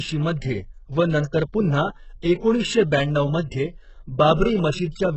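Across the whole clip the speech has a hollow, synthetic treble: s sounds come out gritty and lispy, and nothing reaches above 8 kHz. Heavy HE-AAC compression is the likely cause. The codec keeps only the lower spectrum and fakes the top by copying lower bands upward under a coarse envelope, so the upper harmonics don't line up with the real ones. The damage fits a very low bitrate, around 8 kbps.

At 2.22 s a brief hiss creeps in just ahead of an attack, a pre-echo spread over about 14 ms. It returns from 4.34 to 4.39 s, smearing about 47 ms before the onset and softening it. In each case the transform block holding the attack spread its quantisation noise evenly, so noise sized for the loud onset leaked into the quiet moment before it.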